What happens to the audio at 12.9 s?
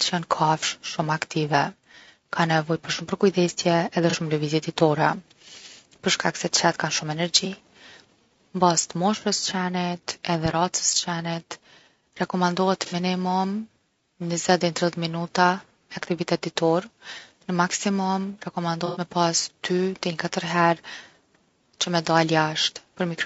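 From 12.86 to 12.94 s there is AAC frame loss with concealment. A short run of compressed frames never reached the decoder, which filled the gap by reusing the last good spectrum with its fine detail randomised. What you hear is a brief smeared, noisy or phasey patch rather than a clean hole. That is the difference from a plain dropout: the sound doesn't go silent. Its length fits about two lost frames. Throughout the clip, rough, grainy speech with a lowered or synthetic top band likely comes from low-delay AAC compression at 32 kbps, and the concealed patch sits inside that texture.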